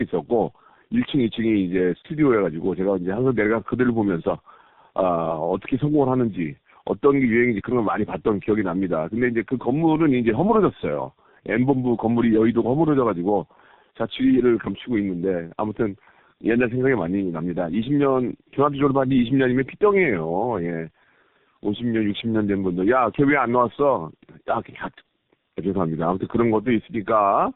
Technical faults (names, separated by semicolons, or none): tandem speech coding